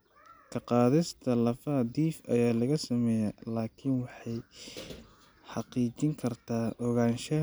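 No technical faults can be heard anywhere in the recording, and the signal stays continuous and steady throughout.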